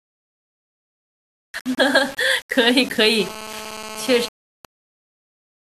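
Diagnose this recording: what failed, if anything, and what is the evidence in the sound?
The speech throughout has a coarse, grainy distortion that rides on the signal itself. It thickens on quieter syllables and roughens the decays rather than sitting as a steady hiss, with the error only roughly 20 dB below the speech. The stage is sample-format conversion. The likely cause is low bit depth without dither: the samples were rounded to about 6 bits, so the quantisation error stays correlated with the waveform instead of being spread into noise.

From 3.19 s to 4.65 s a hard, raspy buzz appears, pulsing at 217 Hz with a dense stack of harmonics. It is unrelated to the speech and sits about 15 dB below it. Its stop-start character within that span points to a phone in data transfer rather than a steady call. This is GSM phone buzz, entering in the analogue wiring: a nearby 2G handset's bursty radio transmissions are rectified by the audio circuitry into audible pulses at the burst rate.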